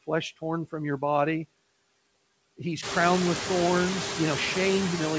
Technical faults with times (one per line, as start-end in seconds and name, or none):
0.00-5.19 noise suppressor artifacts